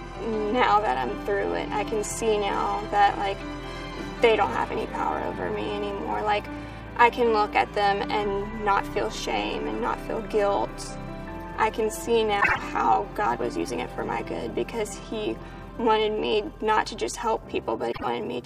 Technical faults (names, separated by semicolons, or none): frames out of order